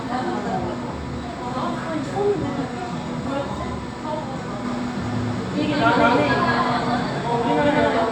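A second, slower capture path or an out-of-step edit likely mixes this recording of sounds in twice, giving a doubled audio track from 4.65 s to the end. A dry, full-band copy, about as loud as the original, trails each sound by around a fifth of a second and enters abruptly.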